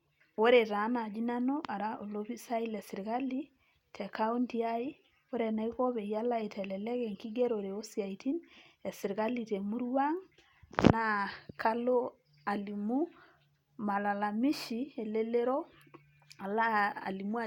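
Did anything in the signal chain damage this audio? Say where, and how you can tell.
No, nothing in the chain has left an audible mark on this speech; there's no point where any stage can be heard damaging the signal.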